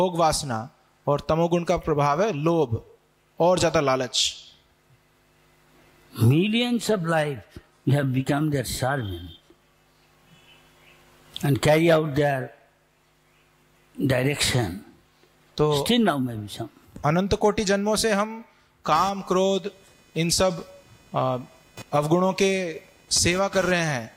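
Computer activity noise enters at 18.95 s and runs to the end: a buzzy, chirping tone pulsing at around 500 Hz, roughly 25 dB below the sound. Processor or graphics load shifts the shared ground under the audio circuit, so the noise follows the computer's activity, not the sound itself.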